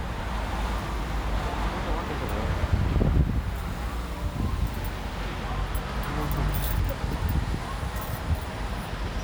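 Nothing here trips the ear at all; the sounds in this recording come across steady and unbroken, with no technical faults turning up anywhere along the way.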